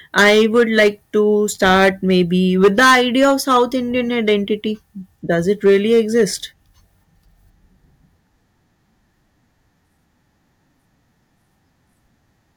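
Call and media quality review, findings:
Harsh fuzz on loud speech at 0.18–0.88 s, 2.63–3.63 s (about 10 dB over), crackle on peaks at 1.62–2.22 s (about 6 dB), 4.28–4.33 s (about 3 dB), 5.49–6.24 s (about 4 dB). Hard clipping: gain stage or converter overdriven, peaks cut flat, adding high harmonics.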